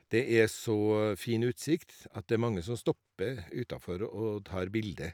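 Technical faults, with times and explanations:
No technical faults can be heard in this speech.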